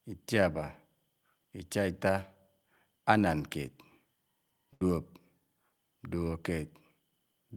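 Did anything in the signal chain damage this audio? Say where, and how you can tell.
Yes: a network burst of packet loss at 4.73–4.82 s. The last sound is held and faded rather than cut to silence, and 80 ms is skipped.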